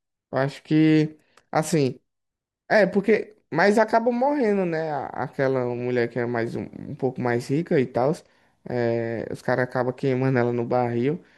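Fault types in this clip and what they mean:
No faults detected in this speech recording; nothing to flag.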